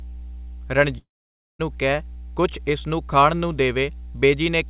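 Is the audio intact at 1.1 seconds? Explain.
No. At 1.1 s the sound sits inside a long network dropout from 0.98 to 1.61 s: packets likely stopped arriving, so a brief fading buzz gives way to silence and about 0.6 s of audio is gone. A mains hum at 60 Hz also runs throughout, roughly 15 dB below the signal, a steady low tone from power-line coupling.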